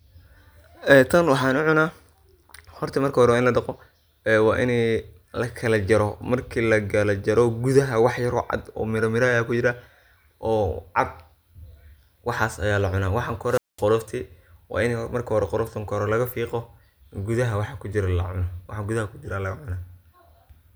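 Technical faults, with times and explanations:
13.47–13.85 s, wireless microphone squelch dropout: the radio link from the speech's transmitter weakens, so broadband hiss and static swell briefly before the receiver's squelch closes and mutes the output for about 210 ms, then reopens as the signal recovers. On a spectrogram this appears as a short wash of noise spread across all frequencies, followed by an almost empty vertical gap; the waveform shows fuzzy low-level noise, then a flat line before the speech resumes.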